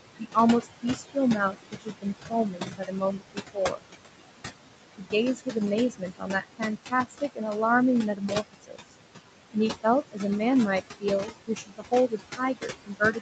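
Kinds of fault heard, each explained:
Noise suppressor artifacts: A suppressor estimates the steady background and turns down each frequency band it judges to be noise, frame by frame. The room noise here sits only about 7 dB under the speech but is pulled down by about 21 dB, so the gaps fall nearly silent while the noise rises again under the speech. Unlike a plain noise gate, this is band-by-band.
Speech cut by the noise suppressor: Here the suppressor mistakes parts of the speech itself for noise and lowers them with the background, by about 19 to 22 dB at the deepest. The affected speech sounds swallowed or faint across spans from 0.19 s to the end, with the longest stretches at 1.51–3.83 s and from 10.81 s on. Unlike dropouts, the sound is muffled and faded rather than gone, and nothing jumps in time.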